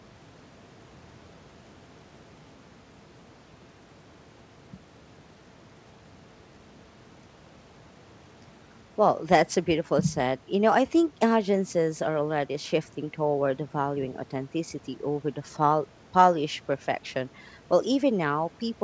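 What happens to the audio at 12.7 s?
Nothing goes wrong at 12.7 s: the speech continues intact through that moment, with the band-limited sound of the G.722 call path, which leaves nothing above 8 kHz.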